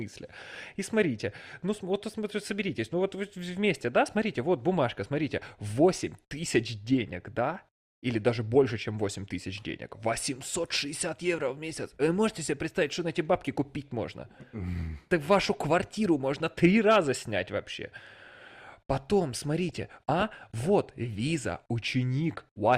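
From 19.69 to 20.67 s the speech bubbles into DAB burbling. Weak reception let bit errors past correction. Short blips of noise hit single sub-bands.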